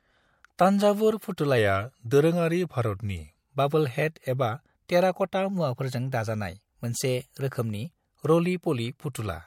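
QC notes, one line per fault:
0.57, 1.37, 4.88 s: pre-echo. A hiss rises about 15 to 19 dB for 12 to 18 ms before each attack, which fits a 26 ms transform window without short blocks. The noise comes before the onset, not after it.
1.58 to 3.37 s: drift correction step. Speed drops 5.78% and pitch falls 103 cents, about a semitone, together. This is likely a clock-matching rate change. Tempo and pitch move in one step and then snap back, unlike a pitch-only error.
5.49 to 7.89 s: drift correction step. The opposite step: speed rises 5.78% and pitch rises 97.4 cents, nearly a semitone. Both shift abruptly together, then return to normal.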